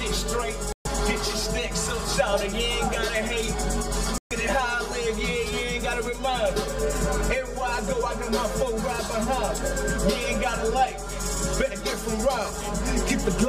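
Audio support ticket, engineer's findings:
Hollow, phasey colouration throughout, fixed notches starting near 100 Hz and evenly spaced upward. Channel delay (comb filtering): one channel roughly 5 ms late, summed to mono, shared content cancelling at regular frequencies.

Silent holes at 0.72–0.87 s and 4.18–4.32 s, sound resuming further along as if it had played on. Likely Bluetooth dropout: packets arrived late and were dropped, 128 ms lost each time.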